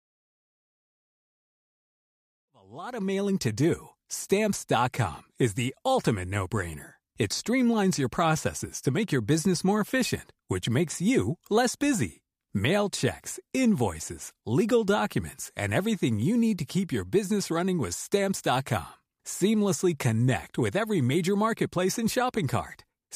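Nothing stood out on listening to this speech clip, which opens with a smooth fade-in completing at about 3.56 s.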